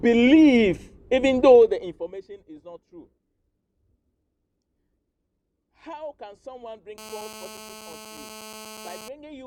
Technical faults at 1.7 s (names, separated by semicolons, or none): zipper noise